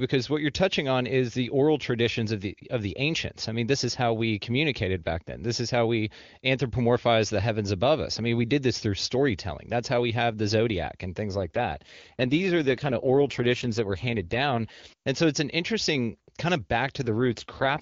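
At 11.36 to 14.90 s, and again from 17.01 s to the end, an AMR rate drop turns the speech rough and synthetic. This fits the AMR-WB coder falling from 23.85 to about 8.85 kbit/s. On a spectrogram the band and waveform stay unbroken, but harmonics blur into grainier energy.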